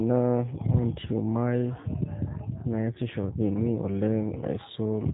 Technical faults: G.729 codec

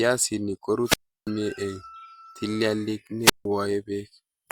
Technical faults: wireless microphone squelch dropout

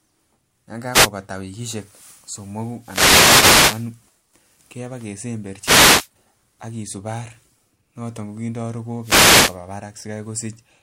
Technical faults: wireless microphone noise hit

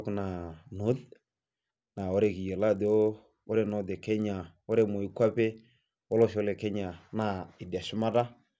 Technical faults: resampler restarted on every block

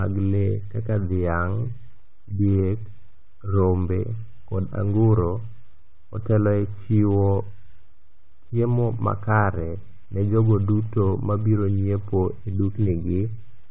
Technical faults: none

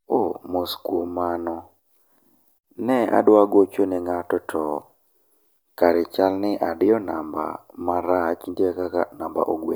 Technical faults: none

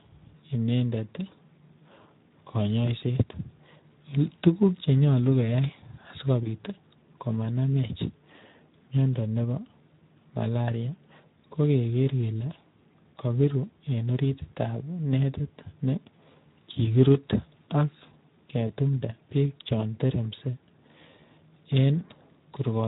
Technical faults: Speex codec; VoIP packet loss concealed by the speech codec

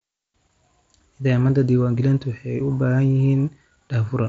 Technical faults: none

